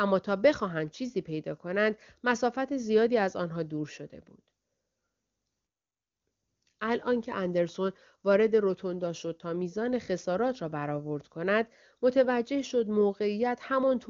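No faults found in the speech; the AMR wideband (HD Voice) coding leaves at most a faint trace, consistent with one of its higher rates.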